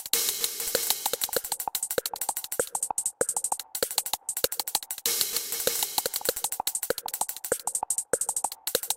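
No technical faults turn up anywhere in the audio.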